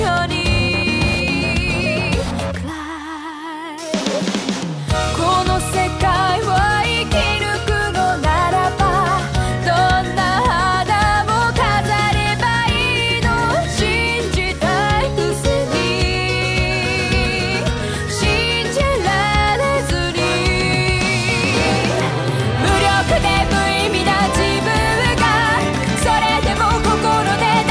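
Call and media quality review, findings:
Nothing stood out on listening; no faults to report for this clip.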